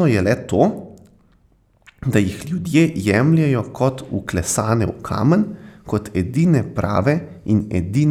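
Speech recording with no audible technical faults.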